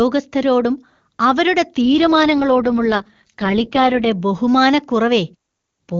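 From 1.86 to 4.12 s an AMR rate drop makes the speech rough and synthetic, which fits the wideband codec falling from 23.85 to 6.6 kbit/s. Unlike a bandwidth switch or packet loss, the band stays full and nothing drops out.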